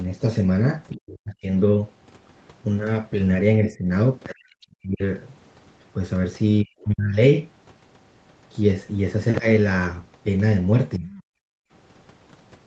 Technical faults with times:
0.91-0.97 other side's voice leaking through
0.97-1.51 speech suppressed in double talk
3.64-3.87 speech suppressed in double talk
4.32-5.02 speech suppressed in double talk
4.61-4.67 other side's voice leaking through
6.63-7.18 speech suppressed in double talk
10.98-11.09 speech suppressed in double talk
11.37-11.71 background gated by the echo canceller

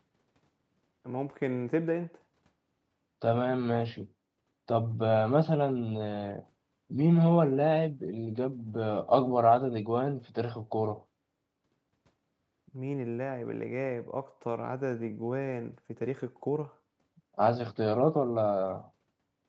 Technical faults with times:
none

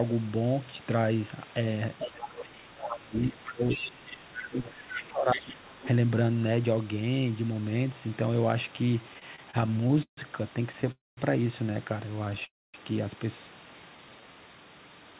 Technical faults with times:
1.99-2.31 other side's voice leaking through
2.06-5.79 speech suppressed in double talk
2.87-2.98 other side's voice leaking through
3.44-4.17 other side's voice leaking through
4.66-5.01 other side's voice leaking through
5.31-5.56 other side's voice leaking through
5.82-5.88 other side's voice leaking through
9.09-10.90 repeated stalls (stutter)
10.92-11.19 call audio freeze
12.25-12.43 repeated stalls (stutter)
12.45-12.76 call audio freeze
13.90-14.33 jitter buffer slow-down

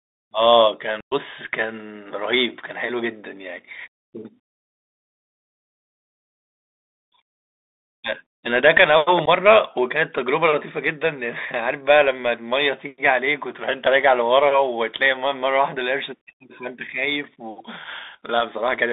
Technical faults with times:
0.00-18.93 Bluetooth CVSD headset codec
1.00-1.14 unconcealed Bluetooth headset packet loss
9.26-9.28 unconcealed Bluetooth headset packet loss
17.85 unconcealed Bluetooth headset packet loss

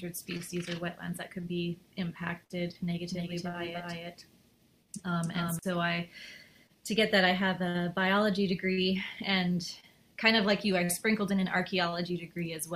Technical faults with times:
3.11-5.59 doubled audio track

